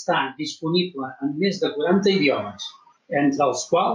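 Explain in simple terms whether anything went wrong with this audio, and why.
Something did go wrong. The recording level was likely set far too high for the microphone, so an automatic level control kept pulling the volume down whenever the speech got loud and letting it rise again in the pauses. This is gain pumping, and it runs through the whole clip. The speech sounds squashed, with loud and quiet parts pressed closer together.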